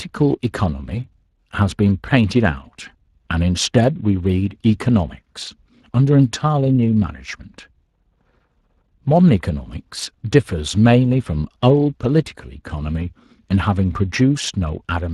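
Speex codec damage runs throughout: the CELP coder spends few bits on excitation, leaving the speech plainly hoarse and noisy, which fits a bitrate near 22 kbps.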